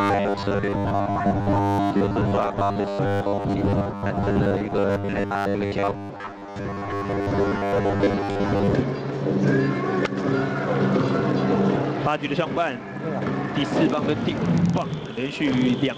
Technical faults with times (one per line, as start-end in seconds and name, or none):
0.01-8.74 robotic sound from repeated short buffers